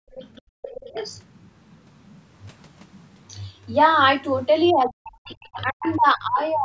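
A speech recording, band-limited to 8 kHz by normal call microphone processing, opens with background gated by the echo canceller. The room sound drops by about 40 dB from 0.00 to 0.15 s and again from 0.42 to 0.62 s. Each dip is brief, a fifth of a second or less. The canceller clamps the microphone while the loudspeaker plays, then releases. Between those dips, a second, quieter voice is heard from 0.15 to 0.42 s and from 0.62 to 1.21 s, sitting roughly 15 to 20 dB under the main speech. This is likely the other side's voice leaking through, as loudspeaker sound the canceller failed to remove. From 4.72 s to the end, the main voice dips and breaks up for around one and a half seconds in total, falling as much as roughly 40 dB. This is likely speech suppressed in double talk. The canceller could not separate the talker from the echo and turned both down. Faint scraps of the other voice also come through at 5.26 to 5.46 s and 5.82 to 5.96 s, roughly 15 to 25 dB down.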